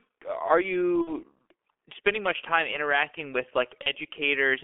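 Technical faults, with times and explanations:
throughout: G.723.1 codec, a heavy, muffled, hoarse sound with blurred consonants, band limited to about 300 Hz to 3.4 kHz, which fits a 6.3 kbit/s stream.
1.01 to 1.14 s: VoIP packet loss concealed by the speech codec. About 60 ms goes missing, likely two lost 30 ms frames. The decoder stretches out the last sound and fades it, then sounds weak or distorted for a moment as it recovers.
3.83 to 3.89 s: VoIP packet loss concealed by the speech codec, right after "much time interacting with". About 30 ms is patched over by extrapolating the previous frame, with a brief smear as it recovers.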